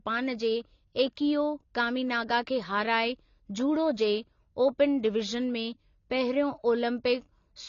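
Throughout the speech, nothing reaches above 7 kHz. The top end sounds dull and muffled. This is likely low-bitrate audio saved at a high bitrate. An earlier lean encode removed the highs, and the later MP3 pass could not restore them.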